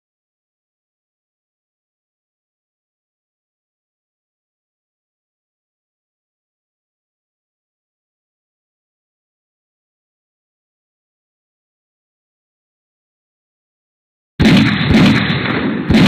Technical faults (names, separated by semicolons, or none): none